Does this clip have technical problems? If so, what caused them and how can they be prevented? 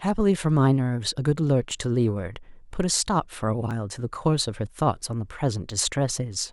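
Yes. The speech skips briefly at 1.71 s, 3.71 s and 5.70 s, each time losing only a few milliseconds, with the audio on either side joined directly and no gap of silence. The two-second spacing points to audio missing between chunks: the recorder or processor likely handles the signal in 2.0 s blocks and drops a sliver at each handover. To prevent it, buffer continuously across block boundaries so the next chunk starts exactly where the previous one ended.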